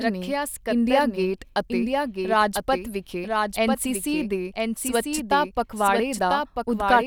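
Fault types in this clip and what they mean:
Doubled audio track: The speech was most likely picked up a second time through a slower path, or an edit left two copies out of step, so both are mixed together throughout. A full-band copy trails the original by about a second, roughly 5 dB quieter, with no decay or room colouring. Each phrase is followed by a dry, slightly softer repeat of itself that overlaps whatever comes next.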